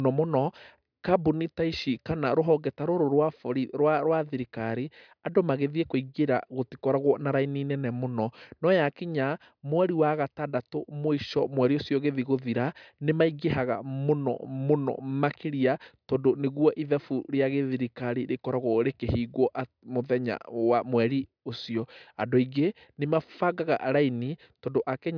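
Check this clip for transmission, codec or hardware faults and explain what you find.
Nothing in this recording points to a transmission, codec or hardware fault.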